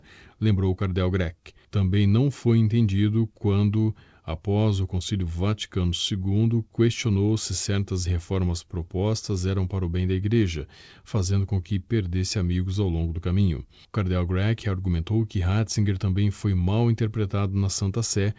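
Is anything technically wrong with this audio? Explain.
No, nothing stood out on listening to this speech, which has come through a call codec that leaves nothing above 8 kHz.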